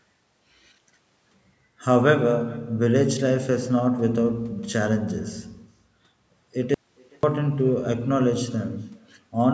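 From the start, the speech carries an echo with no canceller. Each phrase returns about 400 ms later as a faint copy, about 28 dB below the direct sound. It sounds thin, like a repeat trailing behind every syllable. The far end is playing the call through a loudspeaker. Its microphone picks that up and sends it back across the network. Nothing on that path removes it, so the full round trip is heard.

At 6.74 s the speech cuts out abruptly, and it returns at 7.23 s. That makes a gap of about 490 ms. It is an audio dropout to a faint residue. Inside the gap there is only a low mains hum, far below the normal speech level. The break is sudden, not a pause or a fade. The likely cause is a loss of the wanted signal while the input stage after the break stayed open and live.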